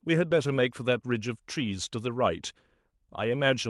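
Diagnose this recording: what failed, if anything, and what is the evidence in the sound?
Nothing failed, and the sound offers no evidence of a fault anywhere along the call path that carried this speech.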